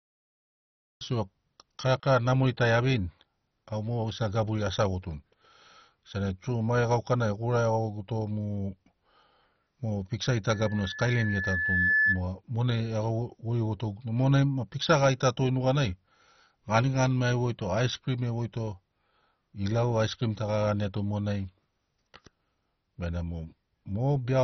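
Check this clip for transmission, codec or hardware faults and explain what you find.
Three faults are audible: a cut-off start, heavy MP2-style compression throughout, and a loudspeaker feedback squeal.

The cut-off start comes first. From 0.0 to 1.01 s there is only digital silence. At 1.01 s the speech begins abruptly, already mid-sound. There is no attack and no fade-in. The recording or stream was evidently started late, so the opening of that sound was never captured. The ear hears a hard, unnatural jump from nothing straight into speech.

Heavy compression runs through the whole clip. Nothing is heard above about 6.1 kHz, so the speech is dull and lacks air. The remaining sound has a gurgling, granular edge. The likely cause is MP2 coding at a low rate, around 32 kbps. At such a rate the encoder lacks bits for its upper sub-bands and switches them off. The bands it keeps are coarsely quantised, and that produces the grainy texture.

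The loudspeaker feedback squeal runs from 10.47 to 12.22 s. A single tone at 1.7 kHz appears and grows over roughly one and a half seconds. It ends up around 5 dB louder than the speech. A microphone was picking up the loudspeaker it fed. At 1.7 kHz the loop gain exceeded one, so that frequency kept reinforcing itself. The result is a pure, piercing whistle that swells over the speech.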